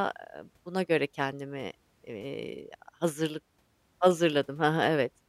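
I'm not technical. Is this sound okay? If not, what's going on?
Yes, no faults are audible anywhere in this speech recording.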